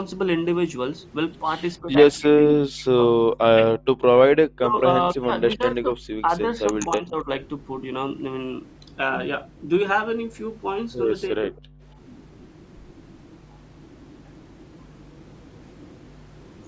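From 1.82 to 3.19 s the talker's speech drops away in pieces, falling by roughly 40 dB at its deepest, for under a second in total. A short dip of about 20 dB follows at 3.54 to 3.61 s. A longer stretch from 4.53 to 7.29 s loses around a second and a half in fragments, down by roughly 35 dB. A brief cut of about 30 dB comes at 11.37 to 11.53 s. This is speech suppressed in double talk, likely caused by the echo canceller failing to tell the near talker from the loudspeaker echo while both sides spoke, so it turned everything down. What marks it out is that the talker's own speech is what breaks up, chopped and uneven, rather than the quiet room sound between phrases.

At 11.73 to 11.83 s the background is gated by the echo canceller. The room tone plunges by about 40 dB for around a tenth of a second while the loudspeaker plays, then comes straight back as the canceller releases. Unlike the double-talk cuts, this is a single clean hole in the ambience. 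Throughout the clip the call microphone processing band-limits the sound, with nothing above 8 kHz.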